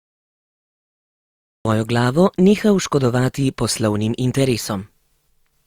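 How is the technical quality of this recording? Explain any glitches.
There is one clear fault in this speech recording. From 0 to 1.65 s there is dead digital silence, then the speech bursts in mid-sound with no natural onset: a cut-off start, because capture began late.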